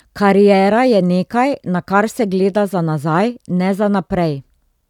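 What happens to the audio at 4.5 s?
At 4.5 s the speech runs on intact, with no dropout, click or other fault.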